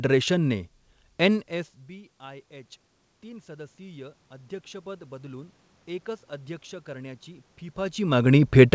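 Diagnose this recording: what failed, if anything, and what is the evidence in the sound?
Automatic gain rising, in call processing. The input dropped about 24 dB, so gain climbed about 7 dB from 1.49 to 5.59 s, and again from 6.84 s. Voice and room noise swell together.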